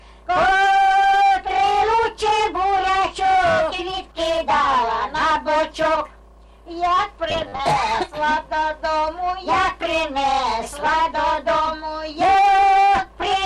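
From 7.30 to 7.60 s the sound turns into a rigid, metallic buzz. This is robotic sound from repeated short buffers. The buzz sits at a fixed pitch of 100 Hz, which fits a repeated slice about 10 ms long. The likely cause is new audio arriving too seldom, so the playback loops the last short slice to fill the gap. Around two fifths of this stretch is repeated material, and the real audio there is skipped.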